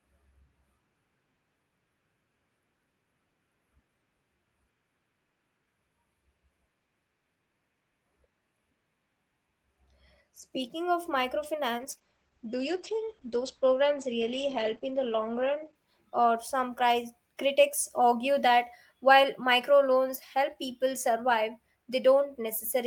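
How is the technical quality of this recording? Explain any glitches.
The recording has one clear glitch, a call bitrate drop, from 11.79 s to 17.09 s. The call's bandwidth estimate fell and the Opus encoder was pushed to a much lower rate, consistent with a fall from around 32 kbps to around 10 kbps. It stayed at its lowest for about 3.5 s. Coarser coding makes the speech rough and watery, and the top end is cut off at 8 kHz, so it sounds muffled. Unlike packet loss, there are no gaps or robotic bursts. The degradation is continuous and clears once the rate recovers.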